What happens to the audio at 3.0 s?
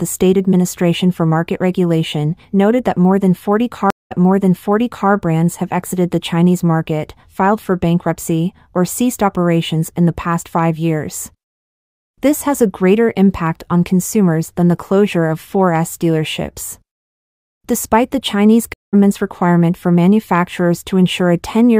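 Nothing goes wrong at 3.0 s; the audio passes through that moment intact, with no dropout, click or distortion.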